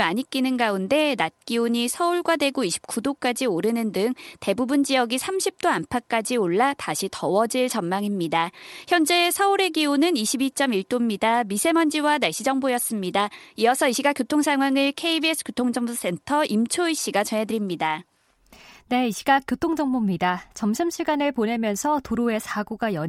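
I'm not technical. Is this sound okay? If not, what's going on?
Yes, nothing in this speech recording points to a technical fault.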